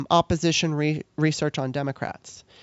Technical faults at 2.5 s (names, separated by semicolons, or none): none